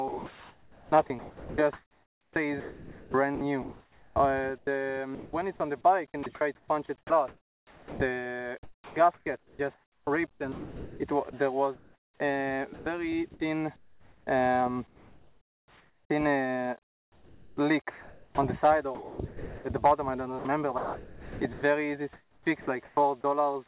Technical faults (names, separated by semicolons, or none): sound chopped by the voice detector; comfort noise in place of the background